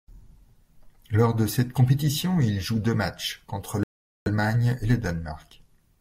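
At 3.83 s the speech drops to dead silence for about 0.43 s, resuming at 4.28 s, a Bluetooth stall, likely from interference delaying packets until the headphone buffer ran empty. The waveform shows a flat gap, and the spectrogram a clean blank vertical band.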